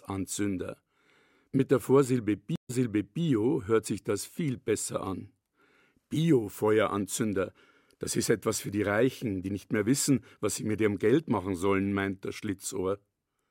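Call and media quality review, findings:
Speech cuts to silence at 2.56 s for 135 ms, then resumes 534 ms earlier, replaying material already heard; settled by 3.23 s. Stream reconnect: dropped connection, player reconnected and restarted the decoder mid-stream, server resent a buffered burst.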